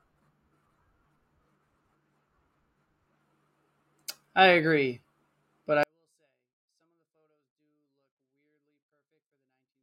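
Up to 5.83 s the speech comes through at its normal level, and then it falls off a cliff: from there to the end it's still clean but about 48 dB quieter, barely audible. That's a 24-bit alignment error (too quiet). The samples were stored as 24-bit values in the low bytes of a 32-bit word, but read as full 32-bit integers, so every sample lands 8 bits too low in scale.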